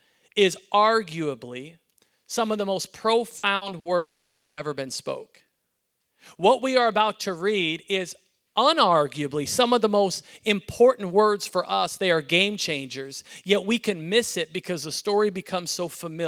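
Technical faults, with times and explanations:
3.37–3.46 s, 3.55–3.64 s, 3.79–3.88 s: burst of packet loss. Right after "some of the most" the sound breaks up three times in quick succession. Each time roughly 60 ms of audio goes missing, and the receiver papers over it by stretching the last bit it had and fading it down. You hear a brief held buzz or hiss where the real sound should be, and then it picks up again a little further along.
3.97–4.60 s: long network dropout. This is the big one. The sound stops for about 0.6 s, and the receiver briefly drags out the last fragment as a fading buzz or hiss before it gives up. About half a second of plain silence follows. When the audio returns, that whole stretch is simply gone. It's likely a network stall where nothing arrived in time, coming hard on the heels of those three smaller bursts.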